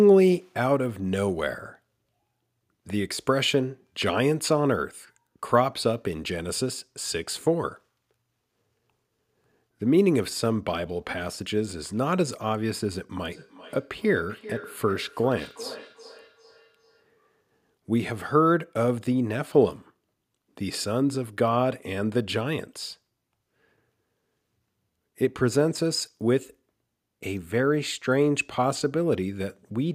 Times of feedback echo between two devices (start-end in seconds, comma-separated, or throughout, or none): 13.32-17.07